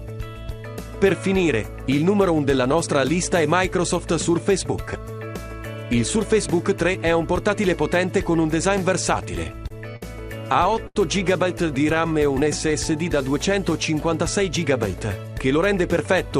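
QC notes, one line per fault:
9.43–10.03 s and 10.47–10.97 s, repeated stalls (stutter): the sound hitches and drags in short gaps, longest 80 ms, as the jitter buffer repeatedly ran empty and the last sound was extended.
11.62–12.91 s, jitter buffer slow-down: sounds draw out at unchanged pitch, about 94% speed, as repeated pitch periods added 78 ms to rebuild the buffer's reserve.
14.97–16.38 s, jitter buffer speed-up: the audio hurries at unchanged pitch, about 106% speed, as roughly a tenth of a second of pitch periods was cut to shed excess buffered delay.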